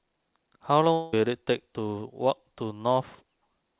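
From 0.93 to 1.14 s, about 200 ms of sound is lost. A fading buzz fills the gap until the audio resumes, likely a long network dropout.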